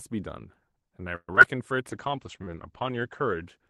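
Between 1.15 and 1.44 s the speech breaks up through repeated packet loss, heard as a robotic sound. Four separate holes open in that stretch. The receiver covers most of them by stretching out the last decoded sound, about 157 ms of fill in total. Roughly 30 ms is simply dropped. The longest gap runs 129 ms, and over half of the stretch is synthetic continuation, so the speech turns choppy.

From 1.92 s to the end of the clip, a call bitrate drop takes hold. The encoder is starved of bits after the link's bandwidth estimate falls. The change in sound fits Opus going from about 32 kbps down to about 14 kbps. Coding becomes coarser, and the audio band narrows from 12 kHz to 8 kHz. The speech goes dull, losing its upper sibilance and air.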